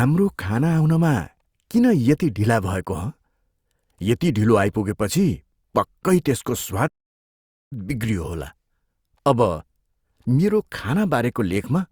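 At 6.87 s, right after "ढिलो आइपुगेपछि पक्कै त्यसको", the speech cuts off mid-flow in a playback stall and stays silent for about 0.83 s, resuming at 7.73 s. This was likely the player running out of buffered data or having its output thread blocked. On a waveform the signal drops abruptly to a flat line. A spectrogram shows a sharp-edged blank vertical band across all frequencies before the speech energy returns.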